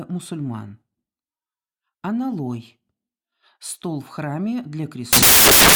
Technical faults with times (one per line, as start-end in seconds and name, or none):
5.13-5.75 samples built from the wrong bytes